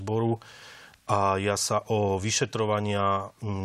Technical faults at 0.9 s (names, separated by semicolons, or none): none